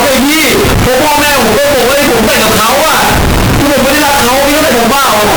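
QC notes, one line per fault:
Throughout, float read as integer: the speech sits at a constant, nearly square, high level, very loud and harsh, with background noise as loud as the speech, yet its pitch can still be followed. The likely cause is 32-bit floating-point samples being read as 32-bit integers, so each sample's sign and exponent bits, rather than its true amplitude, fix the output value, flattening every quiet and loud passage alike.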